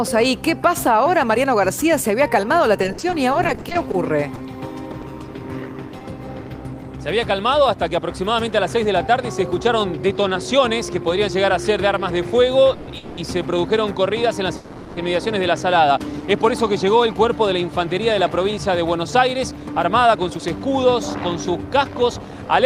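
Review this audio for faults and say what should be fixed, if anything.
Repeated packet loss (robotic sound) runs from 2.83 to 6.02 s: about sixteen short holes, none longer than 60 ms, are patched by stretching the previous sound, so it turns choppy. Better network quality of service or forward error correction would prevent it.

Call audio freezes occur at 12.73 s (0.14 s), 12.97 s (0.2 s) and 14.57 s (0.4 s). Each is a fading buzz or hiss, after which the audio picks up where it stopped, with nothing lost. The likely cause is delayed packets emptying the jitter buffer, and a deeper or adaptive buffer would absorb that.

Jitter buffer speed-up happens from 9.19 to 10.15 s (105%, trimming about 50 ms) and from 18.58 s to the end (106%, about 300 ms). Small pitch-period slices are dropped, so the sound hurries along at the same pitch. Gentler buffer catch-up settings would keep it steadier.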